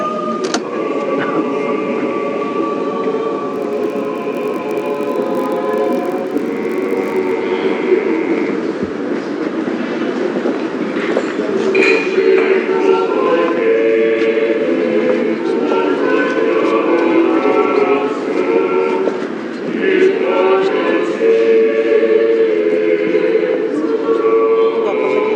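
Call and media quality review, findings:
Buzz at 46.9 Hz, 3.52 to 7.34 s, pitch and pace near normal. Block size mismatch (padded): short writes zero-filled to each read block, fits 1024 samples.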